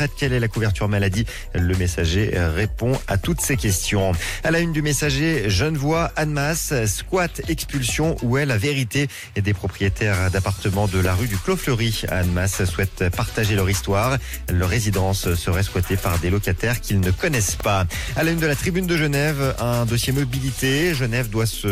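At 3.44 s, 11.05 s and 17.6 s, a sharp snap cuts through the sound, an electrical switching spike. The cause is likely a nearby switch or discharge arcing onto the audio line. The first peaks near -15 dBFS and the later two near -10 dBFS. On a waveform each is a needle-thin vertical jab; on a spectrogram, a bright broadband stripe spanning all frequencies for a few milliseconds.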